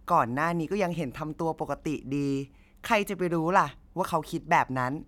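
No dropouts, glitches, distortion or level jumps appear anywhere in this speech recording.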